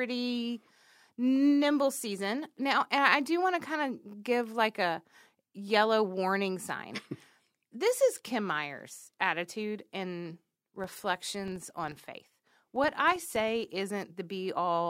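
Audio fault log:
10.76–13.74 s, filter restarted on every block: right after "attitude and", the speech picks up a steady buzz at 25 Hz, meaning a small transient every 40 ms. The filter is dropping its memory at each block boundary and starting again from silence, so every block opens with a brief settling glitch. Because those glitches scale with the signal, the buzz swells and fades with the speech. A spectrogram shows evenly spaced vertical lines 40 ms apart, brightest on loud syllables; the waveform shows a small step or spike at each boundary.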